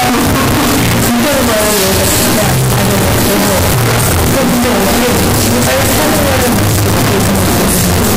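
A recording of sounds, harsh and violently distorted for its whole length, with quiet moments blaring as loudly as busy ones. The likely cause is 8-bit samples with signed and unsigned mixed up, flipping the top bit. That turns every zero crossing into a full-range jump. This sets it apart from plain 8-bit grain, which stays a faint hiss beneath the sound.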